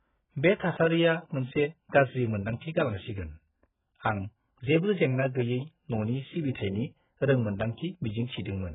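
Speech that sounds dull and smeared from start to finish, with nothing above about 3.8 kHz and a warbling, fizzy texture on sustained sounds and sibilants. The likely cause is heavy AAC compression, where so little data remains that high bands are cut and the rest is coarsely quantised.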